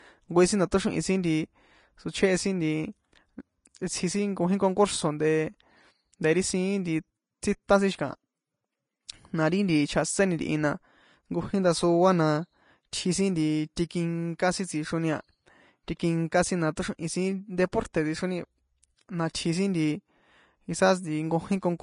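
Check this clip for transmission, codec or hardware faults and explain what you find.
One fault runs through the whole recording, and it is in the coding stage rather than the hardware. The likely cause is Vorbis compression at a low bitrate, around 32 kbps. Throughout, the encoder discards everything above 10.5 kHz and quantises the remaining treble so coarsely that fine detail becomes grainy hiss. Tones sound roughened and consonant attacks are blurred.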